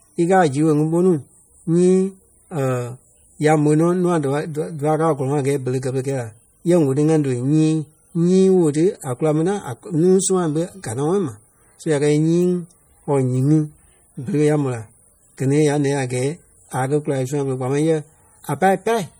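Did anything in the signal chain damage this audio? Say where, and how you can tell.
Yes. The damage is at the codec stage and most likely comes from MP3 compression. The speech carries plainly audible watery swirling, with sibilants chirping as weak frequency lines drop in and out between frames, which fits a starved bitrate near 48 kbps. Nothing remains above 21 kHz.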